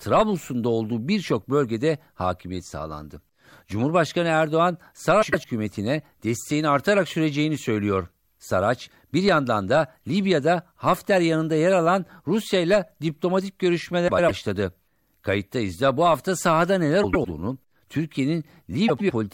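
Frames out of order at 5.22–5.45, 14.08–14.31, 17.03–17.26 and 18.88–19.11 s: each time two neighbouring blocks of about 0.1 s, which fits runs of four frames, got swapped. The speech stutters with its halves reversed.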